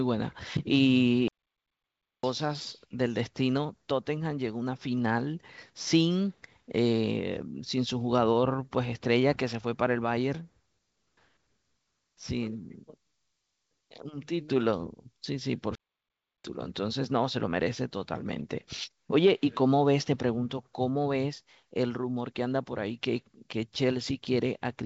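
The player most likely ran short of data or had its thread blocked, producing a playback stall at 1.28 to 2.23 s and again at 15.75 to 16.44 s. The speech cuts to silence mid-flow for about 0.95 s, then 0.69 s, before resuming.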